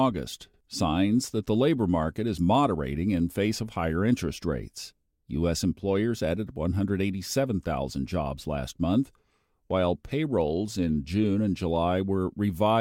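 No technical faults are audible.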